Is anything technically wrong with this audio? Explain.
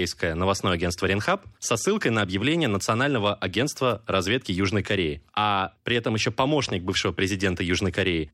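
No, nothing here stands out as a technical problem; this recording of speech comes through without any audible fault.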